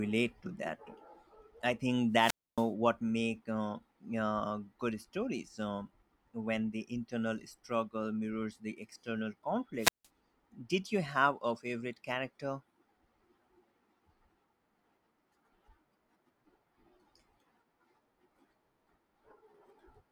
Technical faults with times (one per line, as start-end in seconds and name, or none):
2.13-2.70 wireless microphone squelch dropout
9.78-10.08 wireless microphone squelch dropout